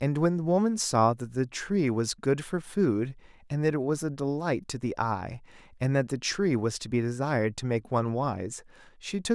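No technical faults can be heard anywhere in the speech recording, and the signal holds steady throughout.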